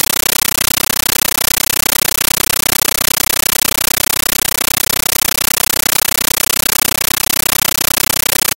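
From start to finish the speech is replaced by very loud, chattering static, pulsing 31.25 times a second in 13.3 ms bursts with silence between. This is a compressed stream played as audio: AC-3 data, fitting a 640 kbps stream, sent as raw samples without decoding.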